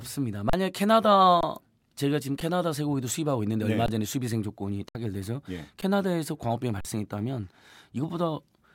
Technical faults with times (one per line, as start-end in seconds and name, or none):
0.50-0.53 underrun with held sample
1.41-1.43 underrun with held sample
2.40 underrun with held sample
3.86-3.88 underrun with held sample
4.89-4.95 underrun with held sample
5.81 underrun with held sample
6.81-6.85 underrun with held sample